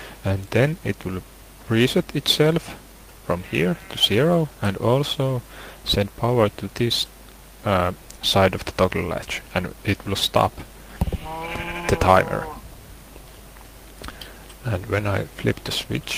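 Nothing here needs flagging: the audio runs along without any technical faults turning up at any point.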